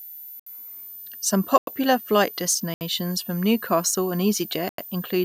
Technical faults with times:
0.00-5.25 switching supply whistle
0.39-0.46 block of digital silence
1.58-1.67 block of digital silence
2.74-2.81 block of digital silence
4.69-4.78 block of digital silence

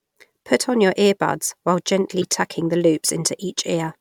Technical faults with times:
2.21-2.24 corrupt frame decoded
3.42 corrupt frame decoded

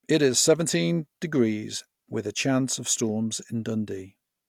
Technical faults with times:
none

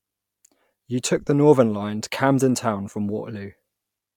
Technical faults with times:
none

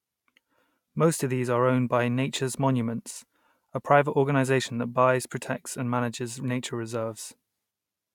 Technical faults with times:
none

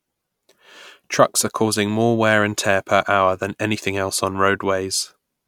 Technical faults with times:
none

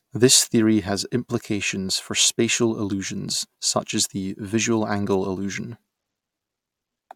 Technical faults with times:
none

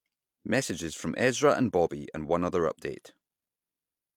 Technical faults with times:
none

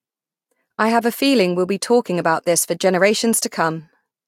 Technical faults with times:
none

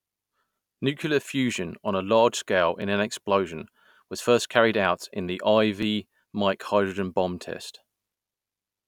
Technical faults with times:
2.82 overlapping chunks
5.83 overlapping chunks

